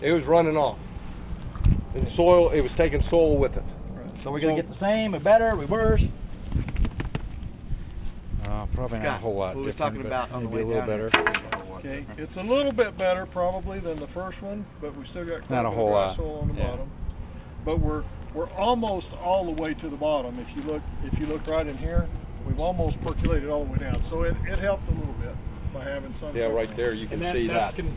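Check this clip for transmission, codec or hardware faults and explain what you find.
No transmission, codec or hardware faults were found.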